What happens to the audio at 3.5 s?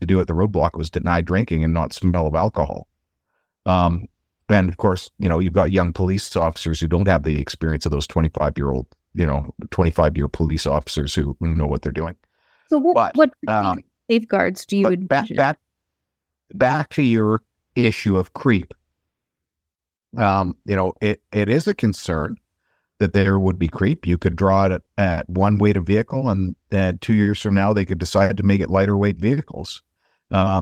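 Nothing goes wrong at 3.5 s; the speech carries on intact through that moment, with no dropout, click or distortion to be heard.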